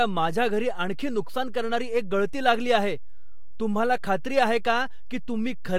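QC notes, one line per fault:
Throughout: DC offset. Nothing audible marks it. The whole speech waveform sits shifted off zero by a constant, using headroom and showing as steady energy at the spectrum's lowest bin.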